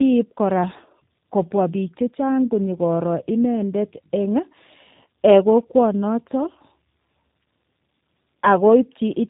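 Throughout the clip, tandem speech coding is at work: the speech was decoded and re-encoded across two speech codecs in a row, which fits a CVSD link feeding a low-rate coder like G.729A. The audio sounds rough, muffled and warbly, with nothing above 3.8 kHz.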